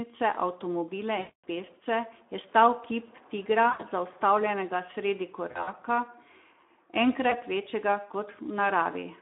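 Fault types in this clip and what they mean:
Speex codec: A low-bitrate speech codec, around 11 kbps here, inside a roughly 250 Hz to 3.6 kHz line band. The speech sounds plainly hoarse and noisy.
VoIP packet loss concealed by the speech codec: Lost packets are filled by extrapolating the last sound, which then fades. This produces stretched, fading gaps at 1.19, 3.69, 5.51 and 7.29 s.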